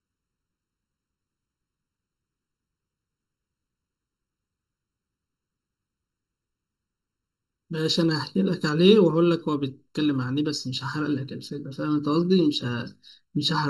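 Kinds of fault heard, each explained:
Channel delay (comb filtering): one side of the stereo pair runs a touch late, roughly 0.7 ms, and when the two get folded to mono they cancel each other at evenly spaced frequencies. Here the first notch sits somewhere around 700 Hz, with more following roughly every 1.4 kHz above it. It runs through the whole speech clip, giving the voice that hollow, phasey, boxed-in quality.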